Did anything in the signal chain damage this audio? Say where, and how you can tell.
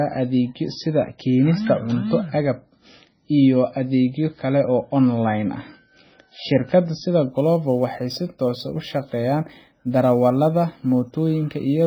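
Yes. Throughout the speech, nothing comes through above 6 kHz, and the sound is watery and swirly with smeared attacks. This is likely MP3 compression at the codec stage, heavily damaged, which fits a very low bitrate around 16 kbps. Starved of bits, the encoder cut the treble and dropped weak frequency lines.

From 7.31 s to the end, a rough hiss rides on the speech and tracks its loudness and brightness. This is sample clock jitter at the converter. The clock wobbles by a few microseconds, so samples land early or late. That leaves an error roughly 35 dB below the signal.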